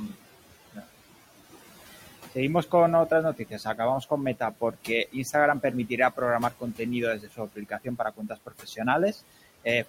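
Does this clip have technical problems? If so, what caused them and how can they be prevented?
Yes. Overdone noise removal runs through the whole speech clip: the suppressor pushes any band near its noise estimate far down, leaving near-silent gaps with twinkling specks. A spectrogram shows scattered isolated dots between words instead of a smooth noise floor. Prevent it by lowering the reduction strength.

Noise suppressor artifacts are also constant. The room noise, sitting about 19 dB below the speech, is cut by about 14 dB between words and rises back underneath them. The waveform's floor pumps up and down with the speech. Limiting the attenuation depth and smoothing gain changes would prevent it.

Speech cut by the noise suppressor occurs at 3.37–3.79 s, 4.39–4.89 s, 6.5–6.8 s and 7.18–8.8 s. Parts of the speech were taken for noise and dropped by about 13 to 17 dB, roughly a tenth of a second to about 0.7 s in each span. 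These parts sound swallowed, and they show as missing speech energy and sudden envelope dips. Prevent this with speech-aware gating or gentler thresholds.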